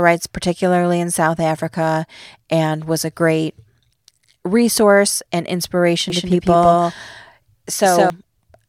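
A speech recording with a doubled audio track from 6.1 to 8.1 s, just after "resource and inspiration". A second full-band copy trails about 150 ms behind, at roughly equal level. It has no decay and cuts in and out abruptly. Likely a second, slower capture path.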